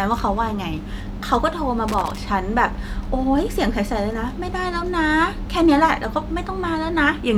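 A speech recording with a burst of loose connector crackle from 1.88 to 2.18 s. For about 0.3 s a worn or dirty contact repeatedly breaks and remakes the circuit, chopping the signal into an irregular scratching crackle.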